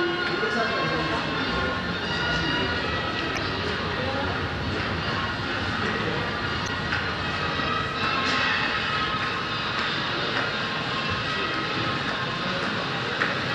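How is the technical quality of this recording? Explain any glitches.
The recording has two brief glitches from damaged data in the compressed stream, at 3.35 to 3.38 s and 6.66 to 6.69 s. Corrupted bytes made the decoder misread frames and lose sync, so each spot is a short chirp or blip in the sound.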